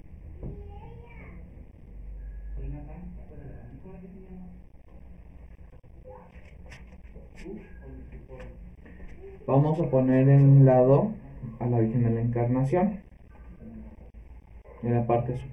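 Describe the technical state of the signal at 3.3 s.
At 3.3 s the signal shows channel delay (comb filtering), as it does for the whole clip. One channel lags the other by roughly 0.4 ms, and when the two are summed to mono, shared content cancels at regularly spaced frequencies, starting around 1.5 kHz. The result is a hollow, phasey colouration. On a spectrogram this appears as fixed dark horizontal bands repeating up the spectrum; the waveform itself looks ordinary.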